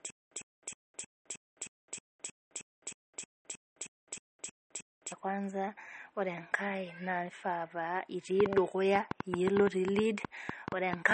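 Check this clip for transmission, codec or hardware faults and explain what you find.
Three faults are audible in this speech clip: codec damage throughout, a stutter in the first half, and a run of clicks near the end.

MP3 compression is heard across the whole clip. There is nothing above 8.4 kHz, and the watery, swirling texture is plainly audible. Both fit a low bitrate around 32 kbps, likely forcing the encoder to drop weak frequency lines frame by frame. The flickering artefacts distinguish it from a simple low-pass filter.

A stutter with silent gaps is already under way at 0.00 s and runs to 5.12 s. A 103 ms fragment repeats 16 times, once every 314 ms, with 210 ms of silence after each. This is likely a stalled player replaying its last buffer. Unlike ordinary dropouts, the identical burst keeps returning while the missing audio never arrives.

A train of clicks runs from 8.40 s to 11.12 s. 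There are roughly 20 clicks, about 7 per second at an irregular pace, each standing out by around 20 dB. The likely cause is interference from nearby equipment or a faulty connection or power supply. Unlike the stutter, the speech continues underneath the clicks instead of being replaced.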